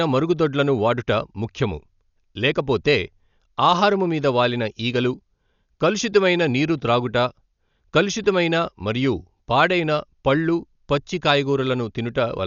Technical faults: Dolby Digital compression

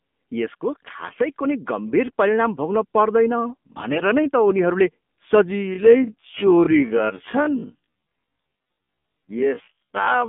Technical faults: AMR narrowband mobile codec; AMR bit errors; time-stretched section

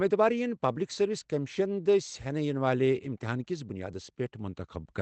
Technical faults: none

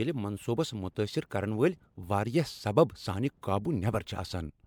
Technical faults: generation loss

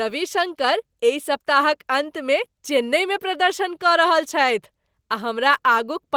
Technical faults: none

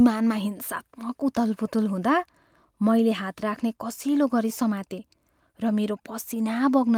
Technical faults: none

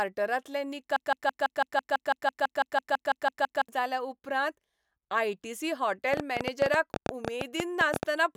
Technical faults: broken-record loop; train of clicks

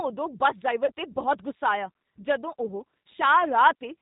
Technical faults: G.729 codec; VoIP packet loss concealed by the speech codec

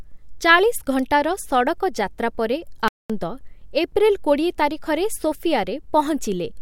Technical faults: playback stall

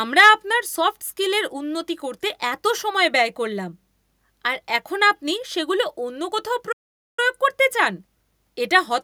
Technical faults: microphone overload; playback stall

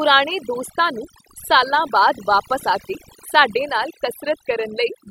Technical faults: overdone noise removal

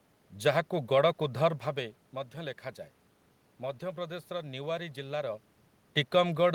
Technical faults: none

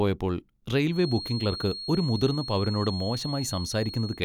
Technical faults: feedback whistle

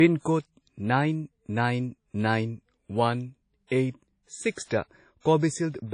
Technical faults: low-bitrate audio saved at a high bitrate

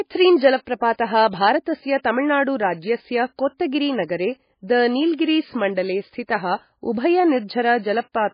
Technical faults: MP3 compression

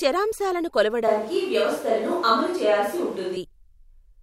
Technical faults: switch to a distant microphone

